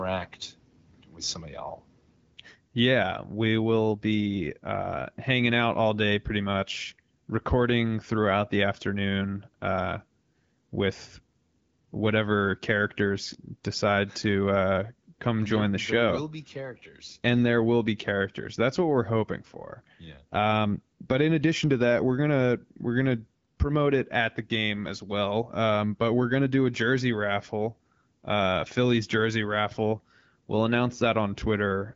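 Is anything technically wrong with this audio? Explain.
No technical faults are present.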